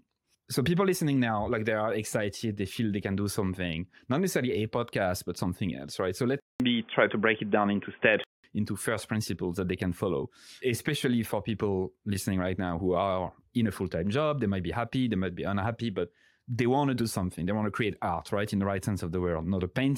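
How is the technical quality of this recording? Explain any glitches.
One glitch stands out in this speech recording. Input switched to a poorer device, from 6.40 to 8.44 s. The system likely changed to a narrower-band microphone. After a 200 ms silence, the sound turns dull and boxy, with nothing above 3.5 kHz, a level shift of a few decibels and a faint new noise floor. The switch comes just before "into first principles that".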